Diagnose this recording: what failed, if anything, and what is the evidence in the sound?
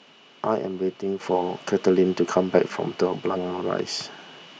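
The microphone volume stepped up at 1.2 s, a fault in the call-processing stage. The evidence is an abrupt rise in level of about 7 dB at that instant, with the speech and the background noise floor jumping together rather than the speech alone getting louder. That shared jump points to gain applied ahead of everything in the chain: the call software judged the input too quiet and raised the device's capture volume in a single step instead of ramping it gradually.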